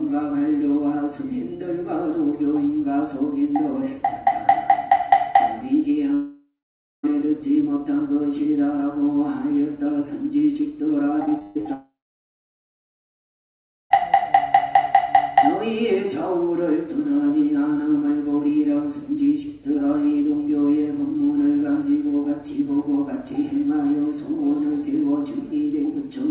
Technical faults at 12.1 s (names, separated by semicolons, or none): long network dropout